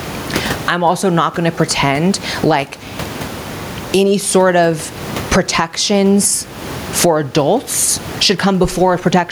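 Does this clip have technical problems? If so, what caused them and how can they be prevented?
Yes. There's gain pumping throughout, with the gain swinging roughly 20 dB. It's likely caused by mic gain set far too high, with a fast limiter clamping down. To prevent it, lower the input gain and slow the limiter's attack and release.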